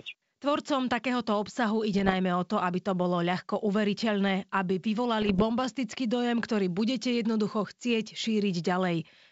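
At 1.94 to 2.15 s, after "takéhoto obsahu", and again at 5.22 to 5.43 s, after "bolo ľahko uveriteľné aby", bit errors on an ADPCM link, around one percent, knock the decoder's step size and predictor off track, giving pops and rough bursts with brief level jumps over the wideband G.722 path.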